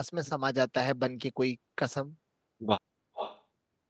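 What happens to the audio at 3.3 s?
From 3.14 to 3.43 s there is an echo leak: a delayed copy of the speech returns about 430 ms late and roughly 10 dB quieter, likely loudspeaker sound the far end's echo canceller failed to remove. It is a distinct repeat, not a room's smooth reverberant tail.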